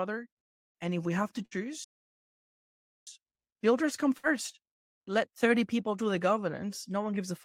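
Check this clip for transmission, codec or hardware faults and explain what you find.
Three faults are audible in this speech clip: two bursts of packet loss and one playback stall.

Burst of packet loss, at 1.45 to 1.54 s after "if we have to", and at 4.18 to 4.26 s after "builders come". Data went missing in transit. The receiver stretched the last sound for about 57 ms, fading it into a brief buzz or hiss. Then speech resumes with about 60 ms skipped.

Playback stall, from 1.84 to 3.07 s, between "if we have to" and "builders come". The audio drops to silence mid-flow for about 1.2 s, then carries on. This likely comes from the player running out of data or its playback thread being blocked.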